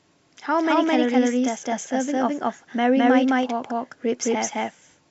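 A speech recording where a second, slower capture path or an out-of-step edit has likely mixed the same audio in twice, producing a doubled audio track throughout: an equally loud, uncoloured copy trails about a fifth of a second behind.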